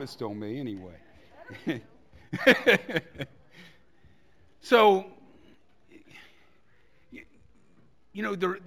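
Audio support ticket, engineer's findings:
Imaging from linear upsampling, throughout. Dull top end, faint metallic shimmer on sibilant and bright content. Probable component: resampler, 16 kHz to 44.1 kHz via straight-line interpolation. Spectrogram: mirrored spectrum copy 8 to 16 kHz, roughly 35 dB down.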